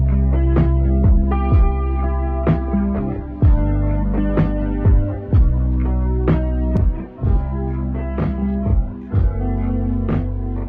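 From 6.77 s to the end at 10.69 s, channel delay (doubling) sets in: one channel runs 40 ms behind the other, and once the two are summed to mono the late copy stands apart, giving an equal-level doubling or slap that trails every sound.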